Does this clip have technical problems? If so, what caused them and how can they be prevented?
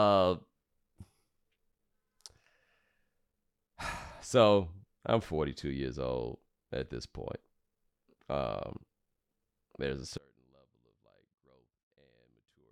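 Yes. From 10.18 s to the end, just after "there's a", the likely cause is one channel inverted: one side of the stereo pair had its polarity flipped, so summing to mono cancelled everything the two channels shared. The centred speech and its low end drop by about 32 dB, leaving only a faint residue of the differences between channels. Checking each channel's polarity and auditioning the mix in mono before delivery prevents this.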